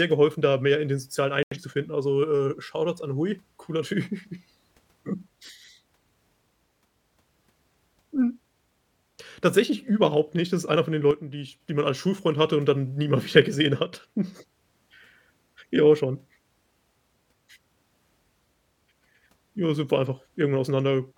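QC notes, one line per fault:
1.43 to 1.57 s, digital broadcast dropout. The speech cuts abruptly to silence and then resumes later, with nothing in between. About 85 ms of programme is simply gone, which fits two corrupted frames. The receiver could not decode those frames, so it muted the output until valid frames arrived again. The material sent during the gap cannot be recovered.
11.11 to 11.60 s and 13.84 to 13.93 s, one channel drops out. Twice the speech suddenly falls by about 6 dB and then snaps back to its earlier level. The first dip lasts about half a second, and the second lasts about 90 ms. The steps are abrupt, with no fade. This is the likely cause: one stereo channel went missing, so the mono sum kept only half of the shared signal.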